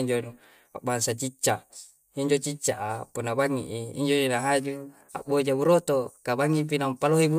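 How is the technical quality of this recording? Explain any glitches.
No glitches or faults heard.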